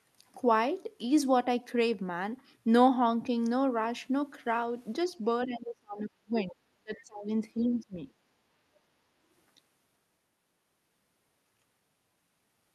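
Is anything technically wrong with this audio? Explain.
Yes. Between 5.46 and 8.0 s the talker's speech is audibly suppressed during double talk, and a faint scrap of the other side's voice leaks through.

Speech suppressed in double talk happens three times: 5.46 to 6.62 s, 6.78 to 7.3 s, and 7.55 to 8.0 s. The voice sinks sharply, by about 35 dB at its deepest in the first stretch, about 30 dB in the second, and a milder 15 dB or so in the third, leaving it hollow and broken for well over a second in total. The likely cause is an echo canceller that, facing both ends talking at once, couldn't tell the near talker from loudspeaker echo and turned everything down.

The other side's voice leaking through is a brief trace around 6.97 to 7.03 s, sitting roughly 30 dB under the talker and heard as a scrap inside the second dip. This is likely residual echo: the far voice played from the device's loudspeaker, picked up by its microphone, and not fully removed by the canceller in that same moment of overlap.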